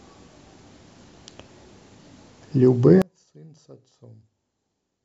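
At 3.02 s the speech drops by about 30 dB and stays down to the end, leaving only a faint remnant. The likely cause is one channel inverted: with one side's polarity reversed, everything common to both channels cancels when they are summed to mono.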